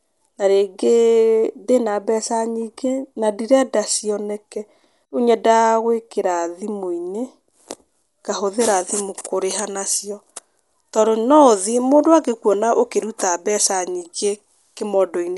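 From start to finish, the speech sounds dull, with nothing above 11.5 kHz. A rough, fluttering noise clings to the voiced tones. This points to likely Dolby Digital compression at a low bitrate, perhaps 64 kbps. Starved frequency lines get filled with noise.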